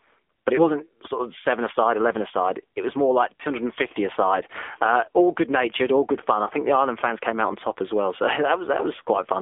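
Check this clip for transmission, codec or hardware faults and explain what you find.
Two faults are audible: the whole clip has passed through a narrowband mobile speech codec, and three single speech frames drop out along the way.

AMR narrowband mobile codec, throughout: the speech sits in a band of 250 Hz to 3.5 kHz, with a buzzy, synthetic edge from a pulse-driven vocal tract model. That coarseness fits a low rate around 7.4 kbps. Unlike a plain telephone band filter, this one also degrades voice texture.

Lost AMR speech frames, at 0.56, 3.37 and 6.44 s: each time one 20 ms frame failed, and the decoder repeated the previous pitch and spectral settings at reduced gain. What's heard is a brief dip or warble, not a hard click or silent gap as a plain dropout would give.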